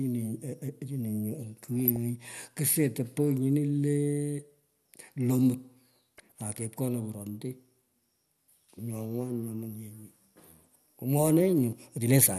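Throughout the 12-second speech clip the sound is dull and granular, with a gurgling edge. This is likely MP2 compression at a low rate, plausibly around 80 kbps. Too few bits forces the encoder to drop upper sub-bands and quantise the rest coarsely. On a spectrogram the top end is ragged, with high-frequency blocks switching on and off frame by frame. The waveform shows little of this.

From 1.80 to 1.98 s, and again from 6.17 to 6.32 s, DAB burbling breaks in as short bursts of burbling over the speech. Each burst fits about a dozen damaged frames. Bit errors slipped past error correction at a rate of roughly a tenth to a fifth of a percent, corrupting samples and scale factors so single sub-bands jump in level. A spectrogram shows isolated bright horizontal bars flaring for up to a frame each, and the waveform shows small erratic spikes.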